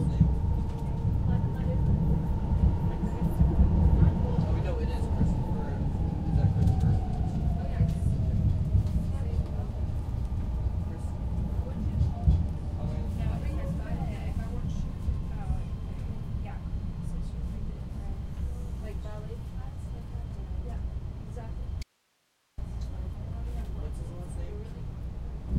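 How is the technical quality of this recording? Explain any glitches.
One glitch stands out. At 21.83 to 22.58 s, an audio dropout to a faint residue cuts the sound abruptly for 0.75 s, leaving hiss roughly 45 dB down. It likely comes from a momentary signal loss with the input still live, and it shows as a flat, near-empty gap in the waveform and spectrogram.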